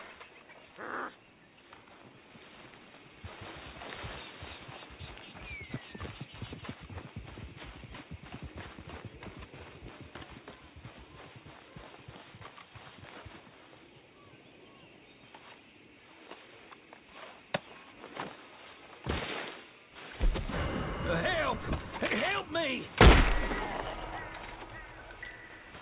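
No technical fault can be heard anywhere in this audio. Nothing in it points to a problem in how the sound was captured, processed or delivered.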